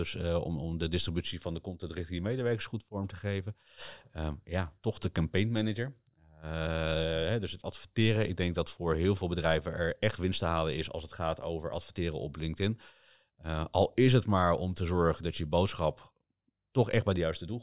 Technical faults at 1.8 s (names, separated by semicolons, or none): none